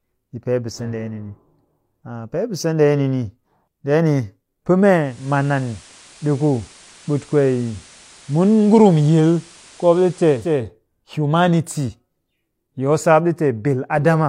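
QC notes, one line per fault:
4.94–10.64 s, digital radio blending to analogue: receiver lost digital and cross-faded over 350 ms to FM, adding hiss roughly 25 dB down.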